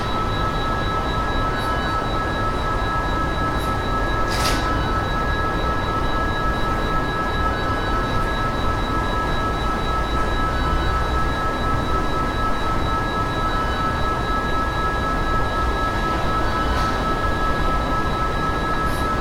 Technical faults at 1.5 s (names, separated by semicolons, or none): none